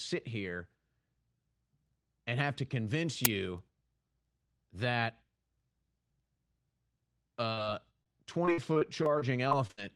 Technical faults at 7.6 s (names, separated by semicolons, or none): short concealed packet loss